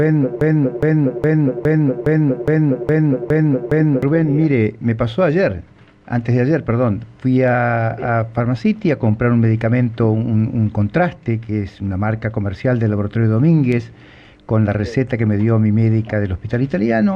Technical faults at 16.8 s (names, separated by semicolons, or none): none